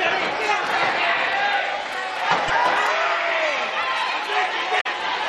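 A short stretch of sound with two bursts of damaged data in a compressed stream, at 2.48 to 2.50 s and 4.77 to 4.87 s. Corrupted bytes there make the decoder misread frames and lose sync until it finds a valid header, producing abrupt glitches.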